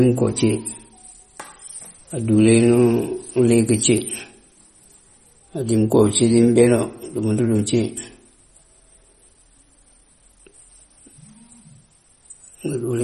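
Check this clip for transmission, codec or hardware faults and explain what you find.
One fault runs through the whole recording: MP3 compression damage, plainly audible. Nothing remains above 12.4 kHz, which fits a starved bitrate near 32 kbps. The likely cause is an encoder cutting treble and dropping weak frequency lines. Speech sounds watery, with swirly sibilants.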